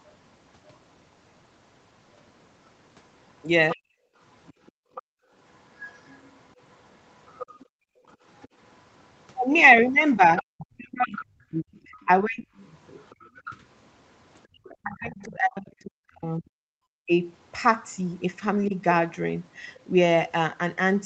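From 3.71 to 15.25 s a second, fainter voice, roughly 20 dB under the talker, runs through the speech. This is the other side's voice leaking through, likely residual loudspeaker echo the canceller missed, and it shows as a weaker, overlapping harmonic pattern on a spectrogram.

At 3.73 to 3.87 s the speech is suppressed in double talk, likely because the canceller cut both voices at once. The talker drops by roughly 35 dB for about 150 ms, a sudden notch in the waveform envelope.

From 4.15 to 5.33 s the background is gated by the echo canceller. The room sound falls away by about 34 dB for roughly half a second, leaving near-empty gaps in the spectrogram's noise floor. At 7.65 to 8.07 s the same gating takes out about 35 dB of room sound for roughly 0.4 s.

Double-talk suppression returns from 10.56 to 12.47 s, with the voice dipping by roughly 40 dB for about a second in total. It strikes again from 14.69 to 17.11 s, about 2 s in all at a similar depth. 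These dips appear as broken, chopped harmonics and a waveform cut into pieces.

A last, slight dip of roughly 5 dB lasts 40 ms at 18.69 to 18.73 s and is barely visible in the envelope. Throughout, the call band stops at 8 kHz.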